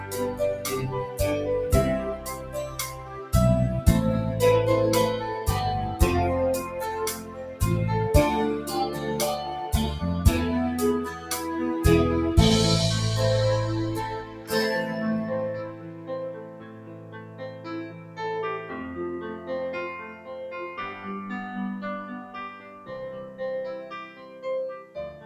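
A noise suppressor built for speech is left running on the whole clip. It mistakes steady, sustained sound for noise. Gain swings by roughly 10 dB as it reacts. Held tones and tails sink while attacks pass, so the level pumps and thins.

Sound is cut by the noise suppressor at 0.0–1.2, 2.16–3.33, 7.15–7.61, 11.13–11.3, 14.21–14.52, 15.63–18.19, 19.36–21.06 and 22.22–25.25 s. Drops reach about 7 to 10 dB. Sustains fade early. The longest dip runs 15.63–18.19 s.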